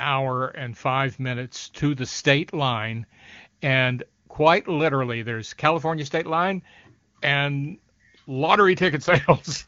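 A speech clip carried over AMR wideband (HD Voice), where the voice sounds clear until an AMR rate drop at 8.79 s. From there to the end the voice turns rougher and more synthetic, which fits a fall from 23.85 to about 8.85 kbit/s. The audio band stays as wide and nothing drops out, which sets this apart from a bandwidth switch or packet loss.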